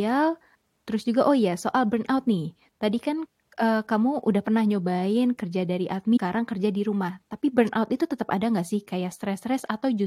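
A stream segment skipped at 6.16 to 6.18 s: after "pernah nyobain kerja dari" the speech jumps to "kerja di" with a blip, likely from a failed segment load.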